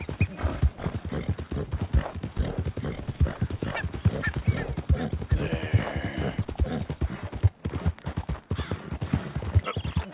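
Nothing stood out as a technical fault on listening to this recording.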